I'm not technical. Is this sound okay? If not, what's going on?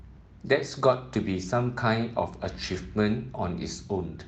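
Yes, this sound is okay: it came through an ordinary internet call connection that was working as it should, and nothing has gone wrong with it.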